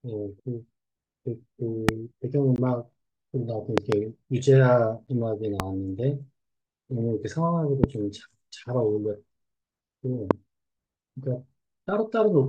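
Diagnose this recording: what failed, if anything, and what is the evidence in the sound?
Loud pops at 1.89, 5.60, 7.84 and 10.31 s, each a single sharp click about 20 dB above the speech, plus a double pop between 3.78 and 3.95 s peaking about 25 dB above it. The speech runs on unbroken beneath each one. These are short voltage steps added to the signal and then shaped by the circuitry after them, likely from a plug, switch, static discharge or driver glitch in the analogue wiring or interface stage.

Gaps at a join of encoded pieces at 2.56 s, lasting 19.5 ms, and at 5.07 s, lasting 10.4 ms. Each is a brief hole in continuous speech with smeared edges, and the speech resumes exactly where it stopped. This points to the codec and storage stage. Separately encoded segments were joined without trimming, so each encoder's start-up delay and last-frame padding stayed in as silence at the seam.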